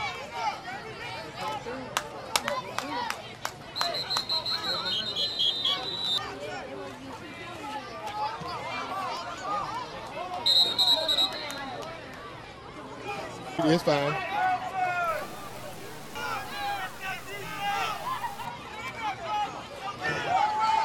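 From 15.08 to 18.45 s the sound turns grainy, with a gritty distortion that tracks the signal and sits roughly 20 dB below it. The likely cause is low bit depth without dither: truncation to something like 7 bits, so the rounding error follows the waveform instead of staying as steady noise.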